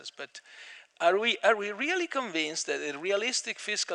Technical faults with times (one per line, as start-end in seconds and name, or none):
none